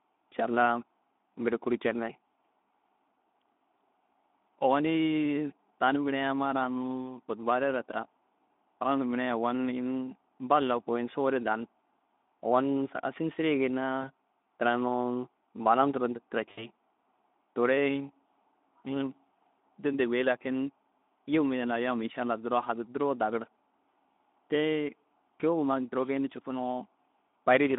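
At 14.02 to 14.04 s and again at 16.51 to 16.68 s, VoIP packet loss concealed by the speech codec interrupts the narrowband Speex speech. Rather than falling silent, the decoder fills each gap by stretching the last pitch and spectral shape into a brief buzzy tone or coloured noise whose level sinks. The first loss, about 20 ms, fits a single lost frame. The second, about 60 ms, fits three. A plain dropout would leave a silent hole with a click, but here the sound is stretched out and fades. The speech also stays weak and smeared for a short while after packets resume, because each decoded frame builds on the damaged one before it.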